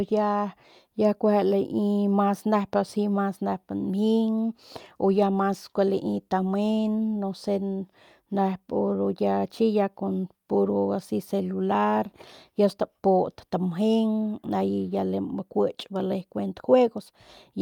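No dropouts, clicks, distortion or other technical defects turn up anywhere in the recording.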